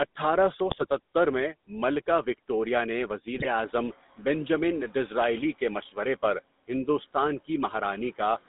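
Speech passed throughout through the GSM full-rate codec, giving a buzzy, gravelly roughness; a spectrogram shows energy confined to roughly 200 Hz to 3.7 kHz with smeared harmonics. GSM bit errors from corrupted decoder parameters break the voice into squawks and gargling at 0.68–0.86 s and 3.33–3.45 s, visible as abrupt level spikes and distorted spectral blotches in those frames. The room noise, rising by about 16 dB around 3.5 s to sit about 22 dB below the speech, shows as a brighter background floor.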